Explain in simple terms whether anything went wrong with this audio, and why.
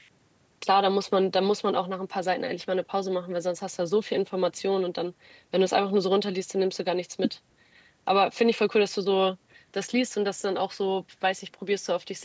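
Nothing went wrong here.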